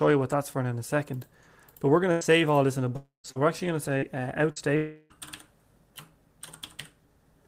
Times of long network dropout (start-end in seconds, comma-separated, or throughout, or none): 2.96-3.27, 4.76-5.13